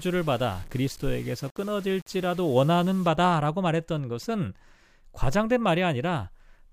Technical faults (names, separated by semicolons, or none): low bit depth without dither